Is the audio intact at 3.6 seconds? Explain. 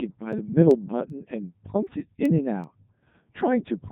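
No. At 3.6 seconds the speech sounds robotic and buzzy, with nothing above 3.8 kHz. This is the Codec 2 vocoder, present throughout the clip. The decoder does not rebuild the original waveform. It resynthesises the voice from sine waves using only the pitch, voicing, energy and a coarse spectral envelope. The heavy damage fits Codec 2's top 3.2 kbit/s mode.

Over that buzz, 3.6 seconds also falls within a run of sharp, uneven ticks that recur roughly every 0.4 s, about ten in all, from 0.33 s to 3.80 s. These are word clock ticks. The receiving device runs on its own clock rather than locking to the sender's, with a small mismatch of roughly 50 parts per million. Each time the two clocks slip past each other, a single sample is dropped or repeated, producing a click.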